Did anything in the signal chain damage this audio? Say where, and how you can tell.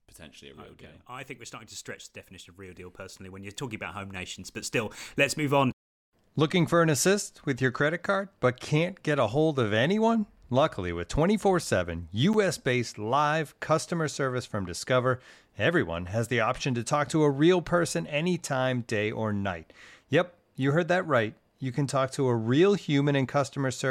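Yes, there's a block of digital silence at 12.33 s in this speech, just before "based live customer service." For about 9 ms the signal drops straight to silence and returns with no fade, so you hear a tick. That points to the driver or buffer stage failing to fill the output in time.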